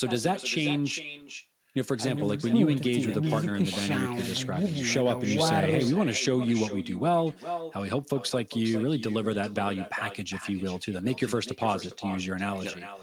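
From the very start and running the whole way through, this speech has an echo with no canceller. The far end is evidently playing the call out of a loudspeaker, its microphone is catching that playback, and nothing strips it out, so the talker comes back to themselves after the network round trip. You hear each phrase shadowed roughly 0.4 seconds later by a copy about 12 dB down, thinner than the original.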